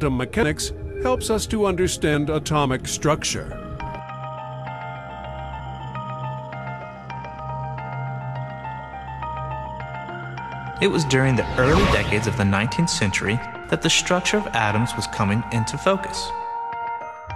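Compressed frames skipped at 0.42, 2.13, 5.59 and 7.39 s: whole frames go missing, so the audio jumps ahead roughly 70 to 200 ms.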